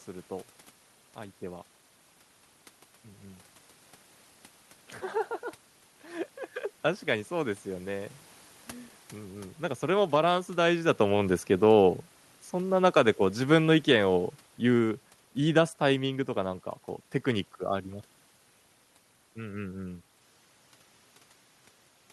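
From 11.5 s to 16.26 s, the automatic gain falls. The gain control judges the input too loud or its background noise too strong and pulls its gain down, by about 7 dB over those five seconds. The speech starts loud and then sinks steadily. The room noise sinks with it, which marks this as a gain change, not a quieter talker. The talker moves around 10.5 s, just before the slide begins.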